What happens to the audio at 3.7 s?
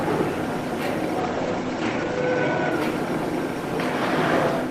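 Nothing goes wrong at 3.7 s; the audio plays through that moment intact, with no dropout, click or distortion to be heard.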